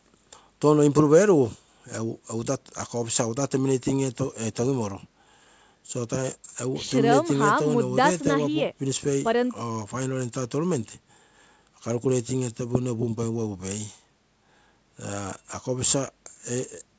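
Speech, with no technical faults to report.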